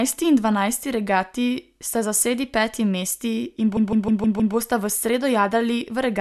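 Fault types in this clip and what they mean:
Repeated frames: a short run of compressed frames, consistent with six frames, was sent over and over, so the decoder replays the same 157 ms block five extra times from 3.76 to 4.55 s, producing a stutter in the speech that adds 0.78 s.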